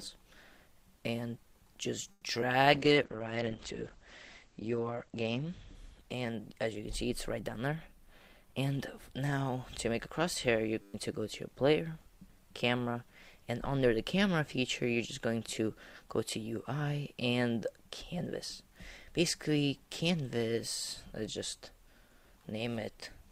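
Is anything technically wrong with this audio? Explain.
Yes. Several network and playback faults cluster between about 2 and 11 seconds.

At 2.11 to 2.24 s there is a call audio freeze. The last sound is stretched into a fading fill for 110 ms. The likely cause is packets held up in transit, so the jitter buffer ran dry. When they arrived, playback resumed where it stopped. Nothing is lost. The stream is simply pushed 110 ms later.

Two short concealed packet losses follow, at 2.34 to 2.37 s and 2.41 to 2.44 s. Audio did not reach the decoder in time. The receiver bridged each hole with about 10 ms of continued sound, then blended back. About 40 ms and 20 ms of real audio are gone. Each is heard as a quick smear or wobble. Together they take back roughly 40 ms of the earlier delay.

From 2.74 to 9.24 s there is a call bitrate drop. The bandwidth estimate fell, and the encoder went from 64 kbps down to 9 kbps. 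It sat at the lowest rate for about 1.7 s. The coding becomes coarse and watery. The top end is cut from 20 kHz to 8 kHz, so the sound turns muffled.

A jitter buffer slow-down runs from 2.79 to 3.17 s. With its reserve low, the receiver repeated single pitch periods again and again. This adds 44 ms. Playback runs at 91% speed with unchanged pitch, so the sound is drawn out.

A jitter buffer speed-up runs from 7.99 to 9.78 s. The buffer held too much audio, so the receiver trimmed short pitch-period pieces repeatedly. Roughly a tenth of a second is removed. The audio plays at 106% speed with unchanged pitch and sounds hurried.

At 10.82 to 10.94 s there is a system hang loop. The machine stalled while the sound hardware kept cycling one 10 ms buffer. That buffer repeats 12 times. The result is a steady buzz at 100 Hz in place of roughly 100 ms of real audio.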